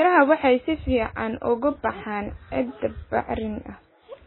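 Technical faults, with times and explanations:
Throughout: MP3 compression. Nothing survives above 4 kHz, so the speech is dull and boxy, and the remaining band has a watery, swirling texture with smeared consonant onsets and chirpy sibilants. This is likely a heavily starved MP3 encode; the damage level points to a very low bitrate, around 16 kbps. Short of bits, the encoder cut the treble outright and dropped weak frequency lines that flicker in and out between frames.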